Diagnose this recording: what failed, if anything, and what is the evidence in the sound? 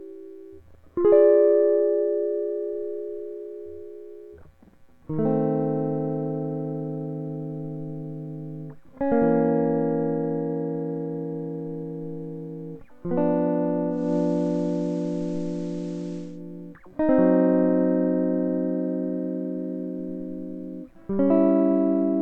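Digital radio blending to analogue, at the reception stage. At 13.89 s the music cross-fades over 268 ms to the FM signal. Hiss appears, roughly 35 dB down. Level shifts about 4 dB. Digital returns at 16.42 s.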